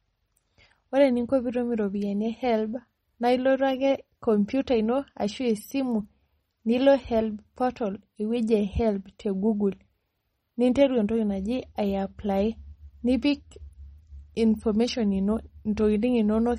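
From start to finish the speech carries plainly audible MP3 compression damage, likely from encoding at a low bitrate, which fits about 32 kbps. Short on bits, the encoder removed all content above 15.4 kHz and dropped weak frequency lines frame by frame, so s sounds turn watery and chirpy and onsets smear. A spectrogram shows a hard flat ceiling at 15.4 kHz, with upper bands broken into flickering patches and holes.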